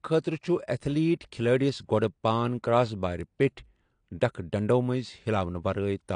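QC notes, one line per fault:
Throughout: AAC compression, likely from a low-bitrate AAC-LC encode near 32 kbps; nothing sounds above 9.8 kHz, leaving the audio dull with plainly audible coding damage.
3.21 s, 5.74 s: bit error spike, a single sample then two in a row jumping by a power of two and returning, each heard as one sharp broadband tick.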